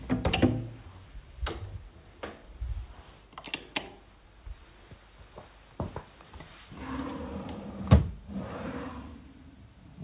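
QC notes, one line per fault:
Nothing to flag in these sounds; they came through a call path whose band stops at about 4 kHz, which fits a G.711 mu-law codec working as it should.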